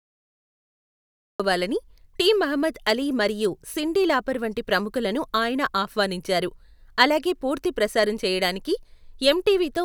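A cut-off start: digital silence until 1.40 s, then speech bursts in mid-sound with no attack, as capture began late; the waveform jumps from flat straight into the sound.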